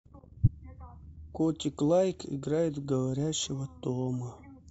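At 0.43 s the speech carries a corrupt frame decoded: damaged bits in the compressed stream were played through, so misread gains and codes put energy at wrong frequencies. It sounds like a chirp, squeak, blip or burst of noise peaking around -10 dBFS, about 56 ms long, spanning roughly two frames, ending at 0.49 s.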